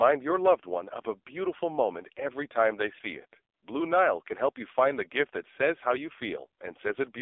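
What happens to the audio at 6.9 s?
At 6.9 s the speech sounds thin, buzzy and synthetic, as it does throughout the clip, with nothing below 300 Hz or above 3.6 kHz. This is the AMR narrowband mobile codec, rebuilding the voice from a sparse vocal-tract model at a bitrate that sounds like about 5.9 kbps, heavily damaging it.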